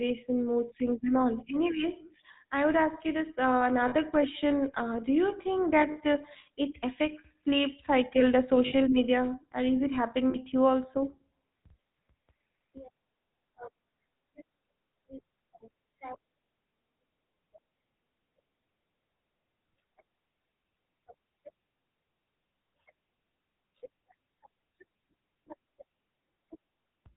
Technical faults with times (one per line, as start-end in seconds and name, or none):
0.00-27.16 GSM full-rate codec
3.88-3.95 lost GSM frames
5.92-5.98 lost GSM frames
8.66-8.73 lost GSM frames
10.30-10.37 lost GSM frames
26.82 lost GSM frames